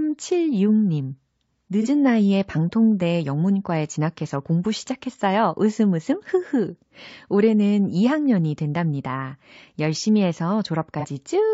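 From start to finish the speech has a rough, grainy texture, with a hiss sitting between the harmonics and a top band that sounds thin and synthetic. This points to low-delay AAC compression, likely AAC-ELD at a rate that fits about 32 kbps. Its short frames cannot resolve pitch harmonics finely, so the encoder smears noise across them. The damage is a steady graininess tied to the voice's harmonic structure.

At 1.82 s, just before "나이에 방통대 영문과에 진학해서", a smeared, phasey patch lasting about 50 ms interrupts the voice. This is AAC frame loss with concealment. A single frame's worth of audio, roughly 30 ms, went missing, and the decoder rebuilt it from the previous spectrum with altered phase. The same kind of blurred patch returns at 11.0 s for about 80 ms. A dropout or mute would leave silence, but here the gap is filled with a noisy imitation of the surrounding sound.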